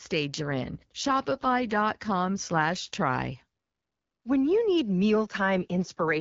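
From 0.37 to 3.02 s, and again from 5.56 to 6.18 s, the speech goes through an AMR rate drop. On a weakening radio link the wideband codec was pushed down to a lower mode, which fits a step from 12.65 to 8.85 kbit/s. The voice turns rougher and more synthetic, then clears. On a spectrogram the band still reaches 7 kHz with no gap, but harmonics smear into grainy texture. The waveform stays continuous.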